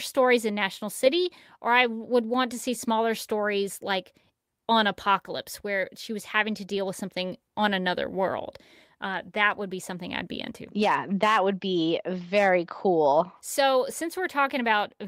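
No technical faults can be heard anywhere in the recording.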